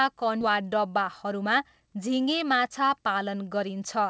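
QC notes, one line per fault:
0.41 s: skip ahead. About half a second of speech is missing, with no gap filled. The buffer dropped queued audio, so the two sides join almost directly.
0.50–2.16 s: jitter buffer speed-up. Speech runs about 5% fast at unchanged pitch and sounds slightly hurried. Repeated removal of tiny pitch-period slices trimmed roughly 70 ms of excess delay.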